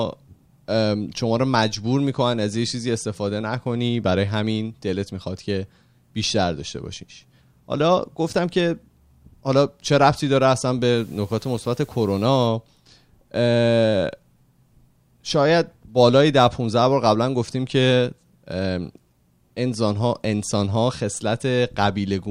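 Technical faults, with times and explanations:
10.97 to 12.47 s, low bit depth with dither: a steady, even hiss rises under the speech for a second and a half, then stops. Its level sits roughly 30 dB below the speech. The hiss fits a signal rounded to about 9 bits. Dither was added before rounding, so the rounding error turns into plain white noise. That is why there is no gritty distortion, only a constant hiss.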